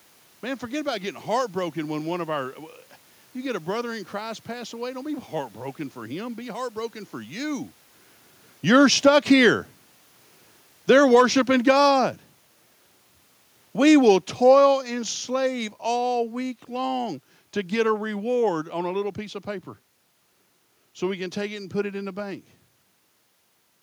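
Automatic gain falling affects this speech clip from 10.77 to 12.18 s, about 4 dB, and again from 13.73 to 17.02 s, about 5 dB, ending just before "to get a reward". Each time, the gain control judged the input too loud or its background noise too strong and eased its gain down, so the speech and the room noise sink together.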